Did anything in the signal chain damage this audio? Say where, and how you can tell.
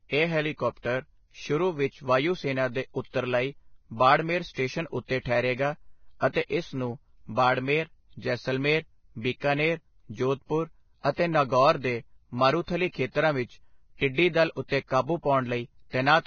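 Yes, the codec stage did, and it runs the whole speech clip: nothing above 6.6 kHz, and the treble that remains sounds hissy and grainy, with roughened tones and smeared consonant onsets. That's likely Vorbis compression at a low bitrate, around 18 kbps, quantising the residue into noise.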